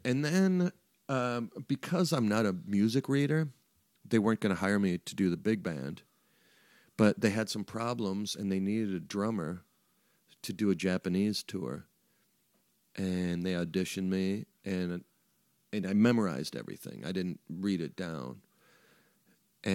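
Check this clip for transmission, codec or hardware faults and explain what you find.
Nothing faulty can be heard anywhere in this speech.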